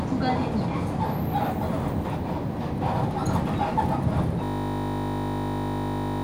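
At 4.44 s a system hang loop begins and lasts to the end. A frozen driver left the hardware replaying one 20 ms buffer 90 times, heard as a steady 50 Hz buzz. The waveform shows identical repeating cycles, the spectrogram stacked 50 Hz harmonics.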